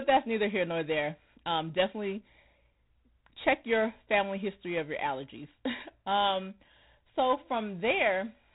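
From start to finish the speech carries G.726 ADPCM damage, plainly audible. Instead of coding each sample outright, the codec sends a few bits describing how far the signal strays from an adaptive prediction, and with too few bits the error becomes a harsh, rasping hiss that rises and falls with the speech level. The coarseness heard here points to the 24 kbit/s mode. The band stops near 3.8 kHz, leaving the sound dull and telephone-like.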